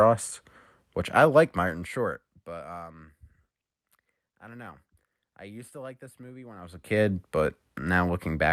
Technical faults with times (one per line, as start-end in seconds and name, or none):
none